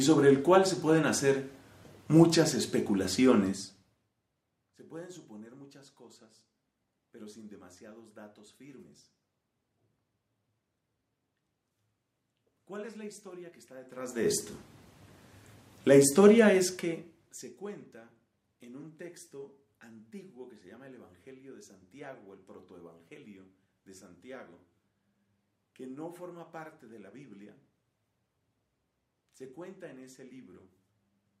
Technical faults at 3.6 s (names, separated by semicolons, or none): zipper noise